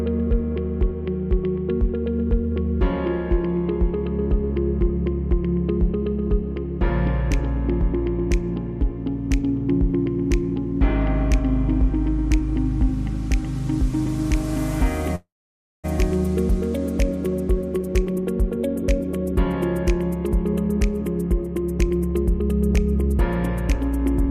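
Packets were likely held up in transit, causing a call audio freeze from 15.15 to 15.86 s: the last sound trails off into about 0.57 s of silence, and the audio then resumes where it stopped with nothing lost. A jitter buffer speed-up follows, as the receiver trims pitch-period slices to shed excess delay: from 17.77 to 19.33 s the audio runs at 107% speed, and from 20.27 to 24.25 s at 105%, together removing roughly a third of a second. The pitch stays the same but the pace sounds hurried.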